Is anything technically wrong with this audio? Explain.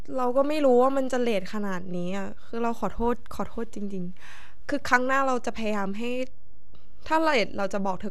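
Yes. The speech carries a DC offset from start to finish. The entire waveform sits shifted away from the zero line by a constant amount, so the signal's centre is no longer at silence. You can't hear the shift itself, but it eats into headroom on one side, letting peaks clip sooner in that direction. On a waveform display the trace rides visibly above or below the centre line even in pauses. A spectrogram shows a steady band of energy pinned at the very bottom, near 0 Hz.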